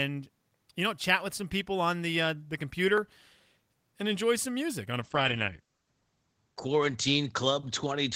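At 2.98 s, just after "on the uh the", there is a block of digital silence lasting only about 0.38 ms. A short run of samples was replaced by zeros, probably because the output buffer was not filled in time. The signal drops straight to zero and comes back with no fade, so the two hard edges merge into a single sharp tick rather than an audible gap.

From 5.02 s, right after "some music on a", a call bitrate drop sets in and lasts to the end of the clip. The encoder was told to work with far fewer bits, consistent with a fall from about 32 kbps to about 10 kbps. The audio bandwidth narrows from 20 kHz to 8 kHz, so the speech turns muffled and coarse, with a rough, watery texture. It is worst for about 1.17 s and does not recover before the clip ends.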